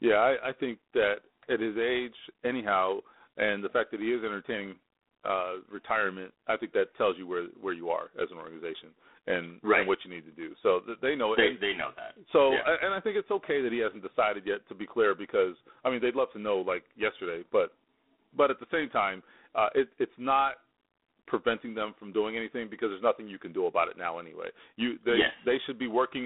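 From start to finish the speech passes through G.726 ADPCM coding, and the damage is plainly audible. The coder sends only a few bits per sample describing the error of an adaptive prediction, so quantisation noise rides on the signal as a harsh, rasping hiss that swells and fades with the speech level; its coarseness fits a 24 kbit/s mode. The line band runs roughly 250 Hz to 3.6 kHz, with nothing above 3.9 kHz.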